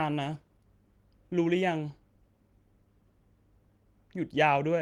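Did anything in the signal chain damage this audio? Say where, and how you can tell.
No, nothing along the chain from capture to playback has left an audible mark on this speech recording.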